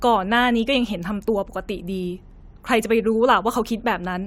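Nothing in this speech recording points to a technical fault at any point, with the signal holding steady throughout.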